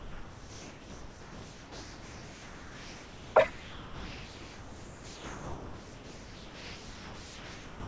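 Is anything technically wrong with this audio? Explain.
Yes. Sound dropped by the voice detector: from 0.00 to 3.36 s and from 3.50 to 7.87 s, the speech gives way to steady, featureless hiss, leaving only a brief fragment near 3.4 s. The likely cause is a sender's detector misreading speech as background, so the receiver substituted comfort noise. On a spectrogram these stretches show flat, even noise with no harmonic or formant structure, and the waveform stays low and uniform. The band stops at 8 kHz, which fits a G.722 call path, and the room noise sits about 41 dB below the speech.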